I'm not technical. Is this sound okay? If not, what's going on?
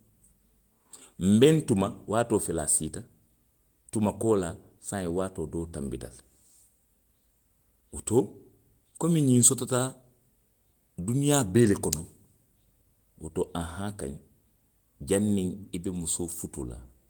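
Yes, nothing in this recording is faulty, so you can relax about it.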